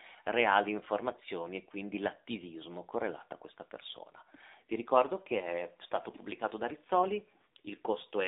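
AMR narrowband mobile codec damage runs through the entire speech clip. Everything is confined to a phone-line band of roughly 300 Hz to 3.7 kHz, and the codec's low-bit pulse model of the vocal tract leaves the voice plainly buzzy and synthetic, which fits a rate near 7.4 kbps.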